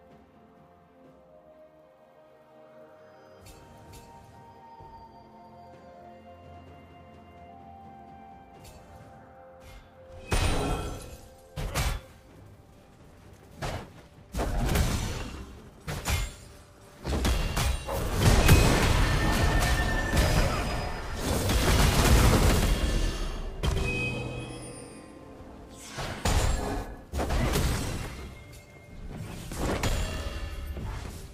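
From 20.70 s to 25.44 s the audio is a doubled audio track: a second full-band copy runs a fixed interval behind, roughly 150 ms, only a few decibels quieter than the original. This is most likely a second capture through a slower path, or an edit that left two copies out of step. Unlike room echo or reverb, there is just one repeat, with no decay or added room colour, and it cuts in and out abruptly at those times.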